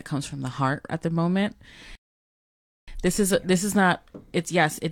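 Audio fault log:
1.95–2.88 s, rebuffering stall: after "at the moment" the speech drops to dead silence for about 0.92 s, then picks up with "this is this is" at exactly the point where it stopped. The player exhausted its downloaded audio and paused playback until more data arrived. Because playback resumes without skipping ahead, no speech is lost; the gap simply inserts extra time, which stretches the clip rather than cutting into it.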